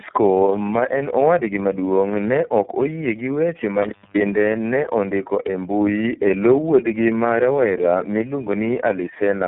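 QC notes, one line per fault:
throughout: tandem speech coding. The speech is rough, muffled and warbly, with nothing above 3.8 kHz. The roughness is heavier than any single narrowband codec would leave, which fits about three low-rate speech coders in a row, such as GSM and iLBC with G.711 links between them. Each stage re-encodes the previous one's artefacts, so the damage stacks. That stacking sets it apart from one codec at a low bitrate, which sounds thin but not this smeared and layered.
3.82–4.21 s: intermittent contact. The audio drops out for about 0.26 s, with crackle at the moment it breaks and again when it reconnects. While it is open, faint hiss remains. A loose plug or cable briefly broke the circuit. Packet loss would cut cleanly or be smoothed over by concealment, but here the edges are electrical crackles and the gap sits on a hiss floor rather than digital silence.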